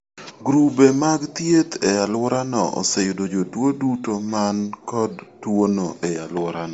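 Bluetooth LC3 compression, likely, runs throughout the speech: energy stops near 7.7 kHz, and the upper range has a plainly audible breathy, grainy edge where detail is replaced by filled-in noise. The damage fits a low bitrate around 32 kbps with 10 ms frames.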